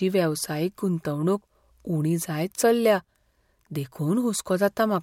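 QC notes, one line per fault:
Nothing stood out on listening to this speech recording.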